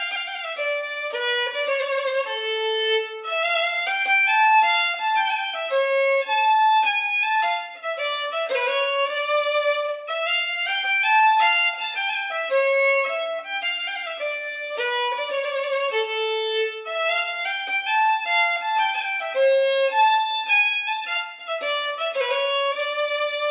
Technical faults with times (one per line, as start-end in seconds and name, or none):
none